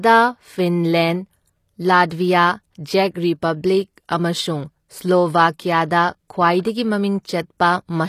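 Throughout the speech, the treble sounds gritty and lispy, with s sounds turned metallic, and nothing lies above 14.9 kHz. This is likely HE-AAC compression, at a damage level that fits a bitrate around 24 kbps. Spectral band replication copies lower bands upward, and on a spectrogram the upper band shows repeated, smeared patterns that do not line up with the lower harmonics.

From 6.63 to 6.65 s, pre-echo puts a 24 ms hiss just before a sharp attack, which then sounds soft and smeared. The codec spreads block-wide quantisation noise into the quiet gap before the onset. On a waveform, a noise ramp leads into the transient.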